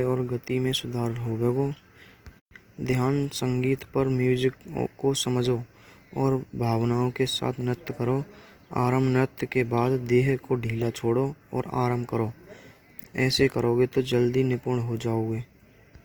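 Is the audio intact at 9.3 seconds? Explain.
No. At 9.3 seconds the speech carries the same damage that runs through the whole clip, likely Opus compression in its music (CELT) mode. Short of bits, the encoder keeps each band's energy but refills the fine detail with folded or noise-like content, so the speech sounds rough and grainy rather than swirly. That lack of hollow, watery gaps separates it from MP3. The band still reaches about 20.2 kHz, even at a low bitrate near 24 kbps.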